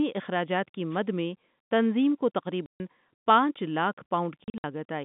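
Wireless microphone noise hit at 0.90–0.99 s, just after "اخراجات کی": a brief swish of static breaks into this speech clip, carried over a G.711 telephone line with a band of about 150 Hz to 3.6 kHz, as the microphone's FM radio signal fades and receiver noise surfaces. Packet loss filled with silence follows at 2.66–2.80 s, after "تنظیم کو", where a clean 140 ms hole points to seven 20 ms packets dropped in a row. It recurs at 4.44–4.64 s, where seven more packets go missing as gaps scattered across 200 ms, the longest lasting 60 ms.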